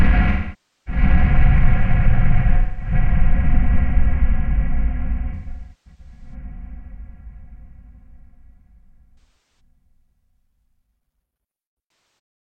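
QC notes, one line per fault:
0.31–1.01 s, 2.57–2.93 s, 5.34–6.34 s, 9.18–9.60 s and 11.88–12.18 s: AAC frame loss with concealment. About 555, 213, 597, 299 and 299 ms of audio went missing. At 5.34 s the loss is scattered over 0.85 s in bursts, the longest around a fifth of a second. The decoder rebuilt each gap from the last good spectrum, so short gaps turn smeared and phasey while long ones decay to a faint noise floor and fade back in. A spectrogram shows blurred, held bands, and the waveform loses its sharp detail.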